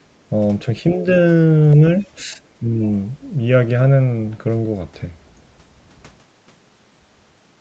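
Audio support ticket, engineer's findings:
Speech suppressed in double talk: brief level dips at 0.95–1.05 s, 2.23–2.38 s and 2.59–2.82 s, about 5, 5 and 10 dB. Likely echo canceller mistaking near-end speech for echo during overlap. Waveform shows envelope notches; spectrogram shows short dimmed vertical bands below the 8 kHz ceiling.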